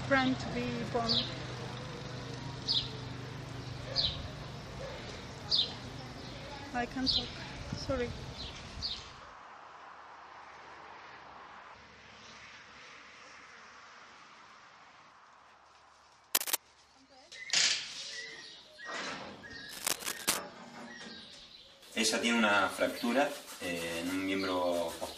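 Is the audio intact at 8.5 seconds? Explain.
No. From 8.47 to 8.49 s there is a corrupt frame decoded: flipped bits in roughly one compressed frame were played anyway, misplacing energy into a brief chirp, squeak, blip or burst of noise near -30 dBFS. A lost frame would leave a gap or smeared repeat instead.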